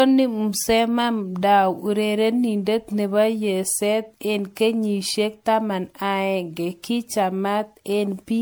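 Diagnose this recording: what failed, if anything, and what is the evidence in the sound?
Throughout the speech the sound is swirly, smeared and hollow, with blurred attacks and a full band reaching 20.1 kHz, so the damage is not a bandwidth limit. This is likely generation loss at the codec stage: audio fitting a 96 kbit/s MP3 re-encoded around seven times, each pass adding fresh quantisation noise and spectral holes.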